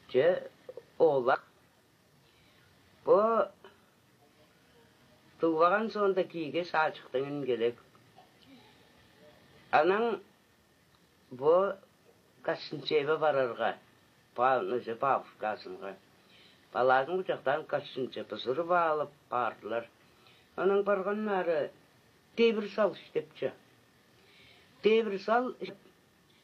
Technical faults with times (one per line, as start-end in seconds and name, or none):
1.30-1.35 compressed frames skipped
25.64-25.70 compressed frames skipped